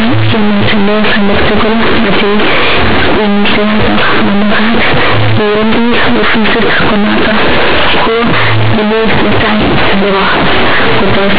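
From start to finish, mu-law companded audio is read as linear 8-bit samples without expansion, making the speech harshly loud and buzzy, with heavy noise filling every pause.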